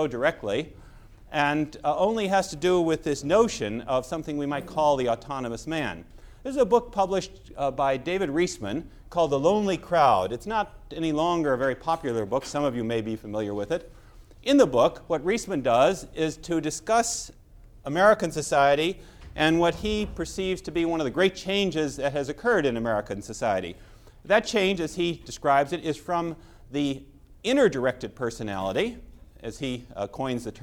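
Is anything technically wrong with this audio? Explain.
No, nothing technically wrong can be heard here.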